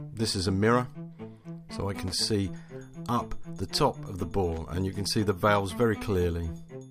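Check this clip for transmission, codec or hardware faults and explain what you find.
Two short bursts of loose connector crackle interrupt the audio, from 2.08 to 2.14 s and from 4.53 to 4.58 s, each about 60 ms long. A worn or dirty contact is rapidly making and breaking, chopping the signal into fragments and adding clicks as the connection flickers. The result is an irregular scratchy crackle. On a waveform, each burst shows jagged dropouts and spikes; on a spectrogram, ragged vertical broadband streaks.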